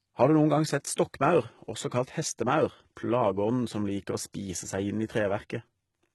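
Throughout, the speech has gritty, metallic sibilants and a treble that sounds bright but synthetic, with nothing above about 11.8 kHz. This is likely HE-AAC compression, with the upper band rebuilt by spectral band replication at a bitrate that fits roughly 16 kbps.

From 0.96 to 0.98 s, just after "du noen gang sett", a brief hiss of about 21 ms leads into a softened, smeared attack. This is pre-echo: the codec's block spread quantisation noise backward into the quiet moment before the onset.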